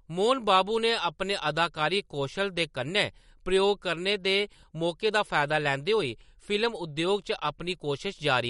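Throughout the speech, the sound is watery and swirly, with the treble cut off sharply above about 11.1 kHz and consonant attacks smeared. This is likely MP3 compression with too few bits, the plainly audible damage fitting a bitrate near 48 kbps.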